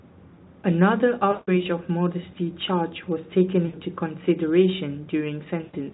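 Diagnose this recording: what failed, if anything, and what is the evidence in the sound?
VoIP packet loss concealed by the speech codec, at the network stage. Speech stretches into a fading buzz or coloured noise at 1.31–1.64, 3.65–3.76 and 5.63–5.75 s, as the decoder extrapolates.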